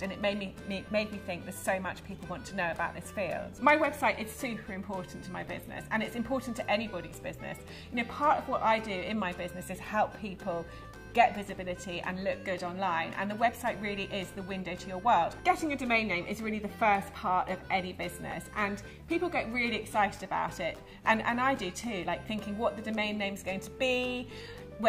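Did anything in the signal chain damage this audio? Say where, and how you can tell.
Yes. Chunks out of order, at the driver or buffer stage. At 18.31 s and again at 21.56 s, a brief jumbled flick lasts about 23 ms. An 11.61 ms block played one slot late. That swap leaves three hard joins.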